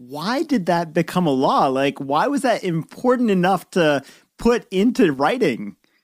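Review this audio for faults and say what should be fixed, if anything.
Right near the end, from 5.14 to 5.19 s, the speech takes a sudden dip of about 6 dB for roughly 50 ms and then snaps back. That abrupt, short level drop is likely one channel dropping out. One side of the stereo pair goes silent briefly, so once the two are summed to mono, the shared content loses half its level and anything only on that side vanishes. To prevent it, check the cable, connector and interface input for that channel, and monitor both sides during capture.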